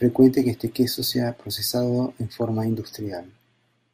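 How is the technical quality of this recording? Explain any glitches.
The recording has two short bursts of DAB burbling, the kind of damage you get from weak digital radio reception.

The first is at 0.77 s, between "que este" and "sea procesado en". The second runs from 2.34 to 2.42 s, just after "sea procesado en". In both, uncorrected bit errors, around 0.1% and then roughly 0.3%, corrupt the MP2 frames. Wrong samples put short blips of noise into individual sub-bands, giving a brief burbling over the speech.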